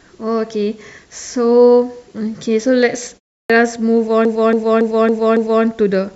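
At 3.42 s, after a pause of about 0.31 s, the speech re-enters with a clipped start: roughly the first 77 ms are swallowed as the output device wakes, so the onset snaps in already underway.

From 4.25 s to 5.64 s come repeated frames: one block of about 279 ms, which points to a short run of compressed frames, plays five extra times, heard as a rhythmic stutter. Unlike an echo, each repeat is identical and full-level, adding about 1.4 s.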